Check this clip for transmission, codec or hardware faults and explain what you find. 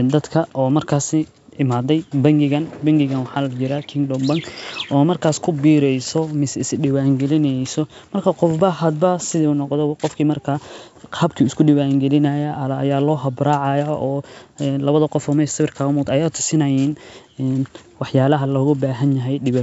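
Nothing here points to a transmission, codec or hardware problem: the speech comes across as ordinary wideband telephone audio, G.722 at 64 kbit/s, with the top end running out around 7.7 kHz as that coding does.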